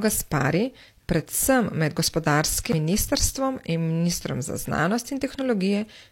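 At 2.72 s there's a CD skip in the speech: a tiny tick and a mute of roughly 10 ms, then the audio carries on from a different spot. A knock or a flaw in the disc made the laser jump onto another turn of the disc's spiral, and it picked up from there.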